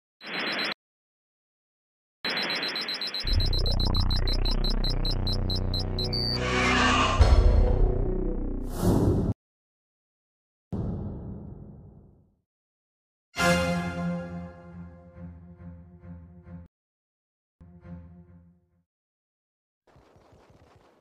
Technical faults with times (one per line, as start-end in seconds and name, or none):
0.72-2.25 playback stall
9.32-10.73 playback stall
16.66-17.61 playback stall